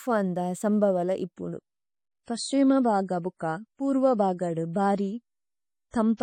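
At 1.37 s the speech switches abruptly, without a gap, to an adaptive stream at a lower bitrate, consistent with a drop from roughly 128 to 32 kbit/s MP3. From there to the end, nothing remains above 10.3 kHz, the treble dulls, and coding artefacts become audible.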